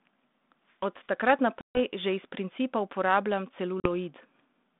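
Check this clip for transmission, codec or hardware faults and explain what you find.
Two dropouts from packet loss on an ADPCM call are heard on this 32 kbit/s G.726 speech, band-limited to 200 Hz to 3.6 kHz.

Packet loss on an ADPCM call, 1.61 to 1.81 s (140 ms lost) and 3.80 to 3.88 s (40 ms lost): silenced packets desynchronise the decoder's predictor and step size. The result is sharp-edged blank gaps in the waveform and spectrogram, then briefly, slightly distorted audio.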